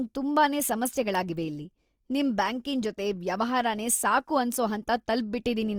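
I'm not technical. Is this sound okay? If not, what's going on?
No. The whole way through, the speech sounds grainy and rough, with a gritty edge. That's likely Opus compression squeezing the recording into too little data.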